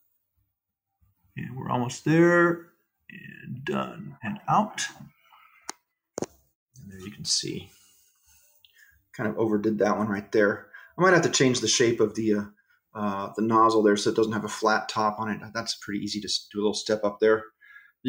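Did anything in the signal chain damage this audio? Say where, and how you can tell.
No, no signal-chain damage heard.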